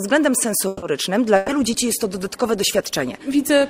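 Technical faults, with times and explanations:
0.67 to 0.85 s, call audio freeze: the sound stops moving forward and its last moment is drawn out for about 150 ms, fading rather than cutting to silence. It then picks up exactly where it left off, with nothing skipped, so the rest of the clip runs about 150 ms later than before. This is likely a delivery stall: packets were held up on the network, the jitter buffer ran dry, and the receiver stretched the final sound until they arrived.
1.36 to 1.51 s, burst of packet loss: about 120 ms of the audio is replaced by a continuation of the sound just before it, which decays as it goes on. When playback returns, it comes in further along, with the stretch between simply gone. Several consecutive packets were lost or arrived too late to use. The receiver concealed the hole by extending the last sound and turning it down, then jumped ahead to the next audio it had.
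1.49 s to the end, call bitrate drop: from just before the loss recovers, the sound turns coarse and dull and stays that way to the close of the clip. The encoder's rate fell from 96 kbps to 20 kbps and sat at that floor for about 1.5 s. The call's bandwidth estimate collapsed and the encoder was told to spend far fewer bits. At 20 kbps it quantizes roughly, giving a grainy, watery texture, and it discards upper frequencies, which leaves a muffled top end.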